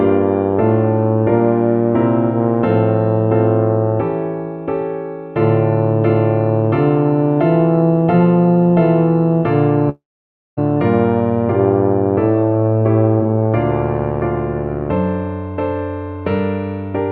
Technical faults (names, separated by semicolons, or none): long network dropout